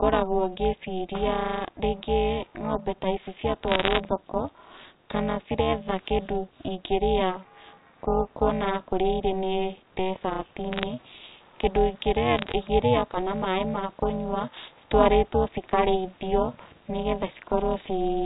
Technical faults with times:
0.00-18.25 overlap-add ripple
3.68-3.99 bit errors on a digital phone line
10.72-10.83 bit errors on a digital phone line
12.34-12.52 bit errors on a digital phone line

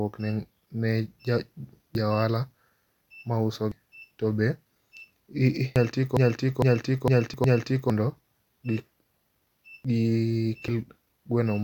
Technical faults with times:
1.95 dropped buffer (overrun)
3.72 dropped buffer (overrun)
5.76 dropped buffer (overrun)
6.17-7.90 broken-record loop
7.34 dropped buffer (overrun)
9.85 dropped buffer (overrun)
10.68 dropped buffer (overrun)

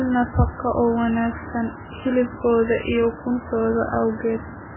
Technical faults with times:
0.00-4.76 MP3 compression

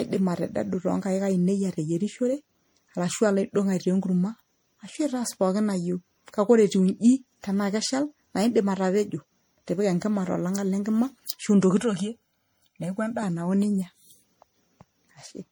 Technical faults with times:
0.00-15.51 generation loss
11.80-13.23 channel delay (comb filtering)

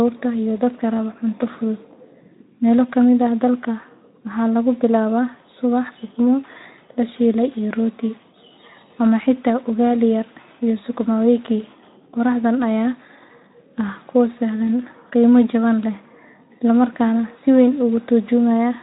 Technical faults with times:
none

